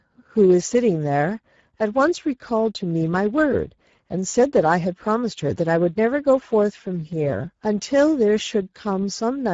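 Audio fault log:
Throughout: Speex codec damage is plainly audible on this speech, with a hoarse, grainy edge. A rate of roughly 9.8 kbps leaves the CELP coder few bits for the excitation, so it's rebuilt only coarsely. Nothing survives above about 7.7 kHz.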